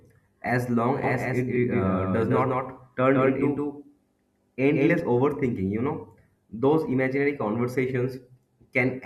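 From about 1.04 s to 5.00 s there's a doubled audio track: a second copy of the speech, at about the same level, trails the first by something like 150 ms, with no decay or room colour. It likely comes from a slower capture path, and it drops out abruptly just before "overthinking you".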